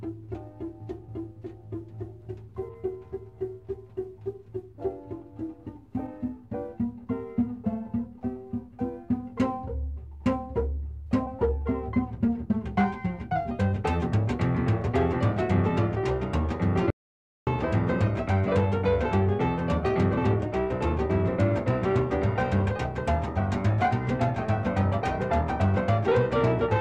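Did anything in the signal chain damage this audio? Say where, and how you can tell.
Yes: an audio dropout to silence at 16.90 to 17.47 s, about 0.56 s of silence with no room tone, unlike a gate, likely from lost input upstream of the recorder.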